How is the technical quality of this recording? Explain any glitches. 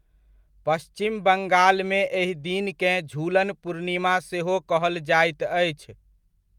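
The speech recording has no audible technical glitches, with the signal holding steady and intact throughout.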